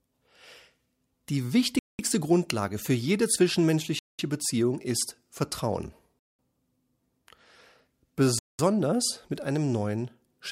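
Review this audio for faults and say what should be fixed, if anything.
Gap between chunks: the speech stops dead for 200 ms at 1.79–1.99, 3.99–4.19, 6.19–6.39 and 8.39–8.59 s. Each 2.0 s chunk plays in full, but silence is left before the next one, leaving a hard-edged hole at every join. To prevent it, schedule each chunk to begin exactly where the previous one ends and trim any padding.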